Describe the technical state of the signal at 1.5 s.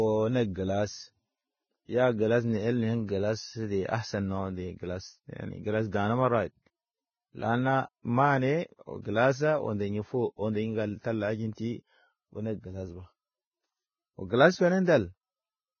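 At 1.5 s the speech sounds hissy and grainy, with a roughened tone and blurred onsets, and nothing is heard above about 6.6 kHz. This is heavy Vorbis compression damage, present throughout the clip rather than just at this moment. The likely cause is a very low-quality Vorbis encode, consistent with roughly 15 kbps: the codec lowered its cut-off and quantised the remaining treble so coarsely that fine detail turned into noise of similar energy.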